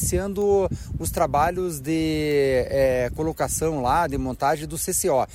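Four bit error spikes tick through the audio at 0.42, 1.18, 2.31 and 3.16 s, single flipped bits jumping the waveform briefly, peaking around -25 to -13 dBFS.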